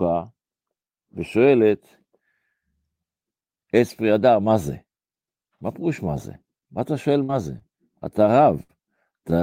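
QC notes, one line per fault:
7.23–7.31 s, burst of packet loss. About 53 ms is filled by stretching the last sound and fading it down. Then audio jumps ahead, 60 ms missing.
7.59–7.63 s, short concealed packet loss. The decoder patches a 22 ms hole by extending the preceding sound. It blends back quickly, leaving a brief smear.
8.63–8.71 s, burst of packet loss. The last sound is held for about 61 ms while fading out. Playback resumes past a 60 ms gap.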